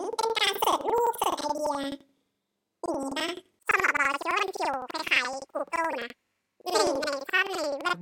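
Planar audio read as interleaved runs through the whole speech clip. Each 85 ms block, which fits a 4096-sample layout, has its left-channel half and right-channel half played back to back at double speed, so the speech sits an octave high with an 11.7 Hz flutter.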